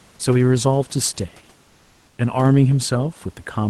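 From 1.67 to 2.17 s, about half a second, the real room background drops out and gets swapped for comfort noise, a smooth, featureless hiss at the same level. That's likely Opus DTX muting the sender in a pause while the receiver synthesises filler noise.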